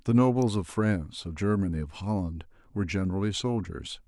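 An electrical switching spike at 0.42 s sounds as a sharp snap or a tight cluster of clicks laid over the speech, lasting about a millisecond. It was likely caused by a nearby switch, motor or static discharge arcing briefly, with the audio line picking up that burst of interference.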